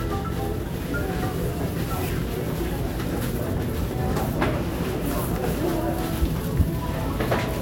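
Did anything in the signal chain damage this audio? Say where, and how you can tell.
No, nothing in the signal chain has audibly damaged these everyday sounds, and no stage from capture through to playback leaves a mark that can be heard.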